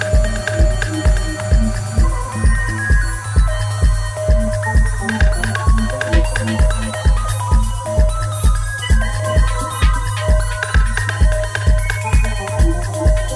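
Nothing is technically wrong with the clip.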